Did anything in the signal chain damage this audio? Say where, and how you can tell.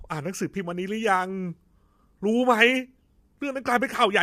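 Yes: the codec stage, likely low-delay AAC compression at a low bitrate; throughout, the speech sounds rough and grainy, with noise filling gaps between harmonics.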